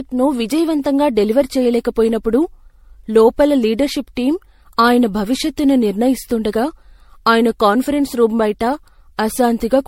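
Throughout, the speech sounds swirly and hollow, and attacks blur. Nothing reaches above 16.5 kHz. This is generation loss, likely from about seven MP3 re-encodes at 64 kbit/s.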